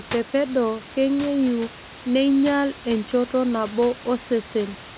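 No technical faults can be heard in the speech, with the room's background noise sitting about 14 dB below it and nothing above 4 kHz, which fits a narrowband call path such as G.711 mu-law working as it should.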